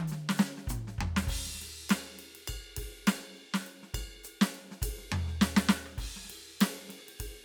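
No technical faults occur at any point in this music, so there is nothing to describe in time order.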